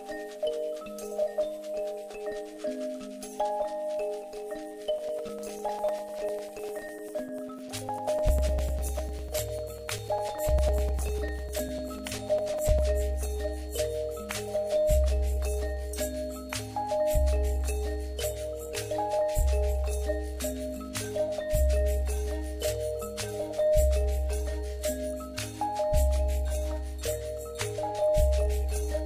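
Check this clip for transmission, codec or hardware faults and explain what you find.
One hardware fault: periodic USB or driver dropouts from 4.99 s to 12.79 s. Every 0.1 s the bus stalls, dropping a few milliseconds of audio to silence, heard as steady ticks.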